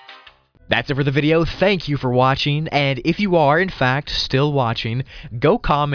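Nothing in this clip stands out as a fault, and the sound carries on from beginning to end without anything going wrong along the way.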